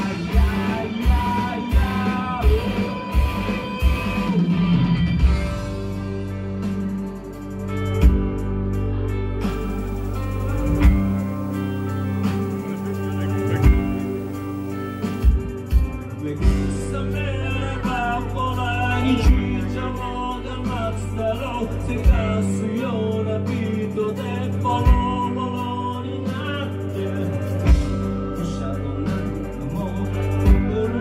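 The audio carries video or display buzz from 9.49 s to 15.3 s, where a screen or video cable is coupling interference into the signal path. It sounds like a coarse 50 Hz buzz, locked to the picture's field rate, with gritty hash riding above it and a thin, very high tone at 15.6 kHz from the line scan. The interference sits roughly 25 dB below the programme signal throughout that stretch.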